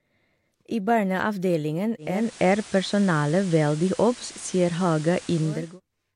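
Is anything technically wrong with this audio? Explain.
Yes. After "I barneavdelingen", from 1.98 to 5.80 s, there is digital radio blending to analogue: the receiver lost the digital stream and cross-faded over 442 ms to the FM broadcast. Hiss appears, roughly 20 dB below the speech, and the level shifts by about 6 dB.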